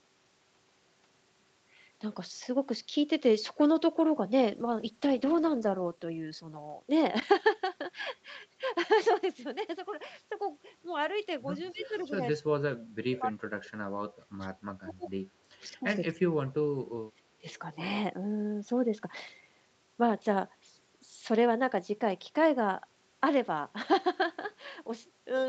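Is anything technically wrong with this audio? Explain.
Yes. The speech has three kinds of call-path faults: a bitrate drop, echo leaks, and speech suppressed in double talk. The Opus path's 8 kHz bandwidth ceiling is normal.

Call bitrate drop, 4.49 to 7.67 s: the encoder's target falls from 32 kbps to 13 kbps and stays at its lowest for about 1.9 s. With far fewer bits per frame, Opus quantizes the spectrum more coarsely. The speech turns rough and watery, with a duller top end, until the rate recovers near 7.7 s.

Echo leak, 11.64 to 12.16 s and again at 17.49 to 17.59 s: a faint delayed copy of the speech trails the original by 232 ms. The first instance is about 20 dB below the speech, and the second is weaker, near 30 dB down. This is likely a far end on loudspeaker whose echo canceller failed to remove everything its microphone picked up, sending the residue back.

Speech suppressed in double talk, 11.72 to 15.07 s, 15.38 to 17.20 s, and 17.40 to 17.45 s: the speech dips sharply. 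The deepest cut is around 30 dB in the first stretch, up to roughly 35 dB in the second, and a brief 15 dB notch in the last. About 2 s and 1.5 s are affected in the two longer spans. The likely cause is the echo canceller attenuating the talker while the far side spoke simultaneously.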